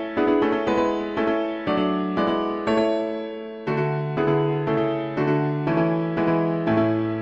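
Throughout, a doubled audio track: a full-band copy trails roughly a tenth of a second behind at about 5 dB lower, likely from a second, slower capture path.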